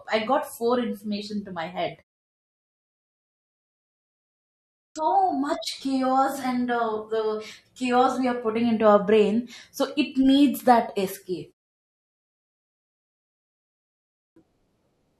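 Speech, with a clipped start after a pause three times. At 4.43 s, after a 2.48 s pause, about 0.53 s of sound is lost up to 4.96 s. At 12.09 s, after a 0.64 s pause, about 0.52 s goes missing. At 13.87 s, after a 1.51 s pause, about 0.49 s disappears. Each time, speech bursts in abruptly without its opening. The output device sleeps during silence and wakes too slowly.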